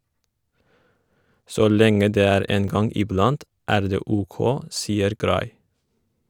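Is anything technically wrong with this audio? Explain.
Yes. A block of digital silence occurs at 2.68 s and again at 5.19 s, lasting 5 ms and 10 ms respectively. In each case a run of samples in the speech drops to silence, the kind of hole left when the output buffer isn't filled in time. Because the signal jumps to silence and back with no fade, both are heard as brief ticks.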